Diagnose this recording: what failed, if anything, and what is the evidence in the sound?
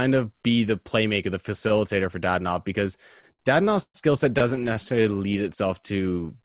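Repeated stalls (stutter) in the jitter buffer: packets arrived late, so it kept running dry from 3.2 to 3.96 s before "skill set" and again from 4.38 to 5.36 s, with the last sound stretched across each gap. The first run's gaps reach about 0.12 s, the second's stay under 30 ms. Nothing's lost, but it drags.

Jitter buffer slow-down from 5.42 to 6.39 s: the receiver repeated pitch periods to rebuild its reserve, adding about 127 ms. Speech plays at 88% speed, same pitch, drawn out. All of this sits in narrowband audio with nothing above 4 kHz.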